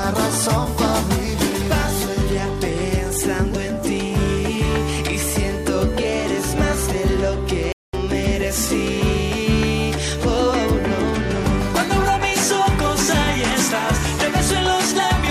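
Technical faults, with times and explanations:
7.72 to 7.93 s, playback stall: the sound cuts out abruptly in mid-flow and the output stays fully silent for about 210 ms before resuming, with no fade at either edge, so the break reads as a hole punched into the audio rather than a natural pause. The likely cause is the player starving for data or its output thread being blocked, leaving nothing to send to the device until the supply recovered.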